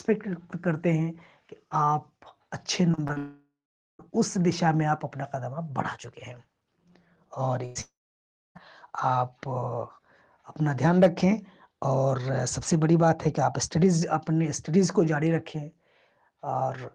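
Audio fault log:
2.91–3.18 s, repeated packet loss (robotic sound): four short gaps, the longest 30 ms, each patched by repeating the last sound, giving a choppy texture over about a third of the span.
3.18–4.01 s, long network dropout: about 0.82 s of audio never arrives, likely a network outage. The last sound is stretched into a fading buzz or hiss, then about 0.46 s of silence.
7.66–7.77 s, burst of packet loss: about 100 ms missing. The receiver holds and fades the preceding sound, so a brief buzz or hiss replaces the lost audio before it resumes.
7.81–8.57 s, long network dropout: about 0.74 s lost, likely another network outage. A short decaying continuation of the last sound gives way to about 0.63 s of silence before the audio returns.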